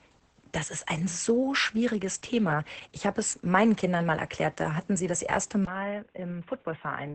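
From the start, the whole clip carries heavy Opus voice compression. The SILK coder at a rate that sounds like about 10 kbps keeps nothing above 8.5 kHz and codes the excitation coarsely, so the speech comes out muffled, hoarse and a bit robotic.

At 5.65 s there's a brief 20 ms dropout, and from there to the end the sound narrows to nothing above 3.8 kHz, drops around 10 dB in level, and picks up a faint new noise floor well below the speech. That's most likely the input switched to a poorer device, and it turns the last stretch dull.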